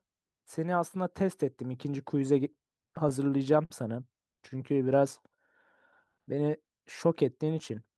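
From 2.53 to 3.72 s, packets kept arriving behind the playout rate, so the jitter buffer ran dry seven times. Each time the receiver stretched the last sound to cover the wait, up to 48 ms, adding about 103 ms with nothing lost. The speech drags and stutters.

From 4.73 to 5.37 s and again from 6.05 to 6.41 s, a jitter buffer slow-down rebuilt its reserve by repeating pitch periods, adding 80 ms and 59 ms. Speech plays at 89% and 86% speed, drawn out but unchanged in pitch.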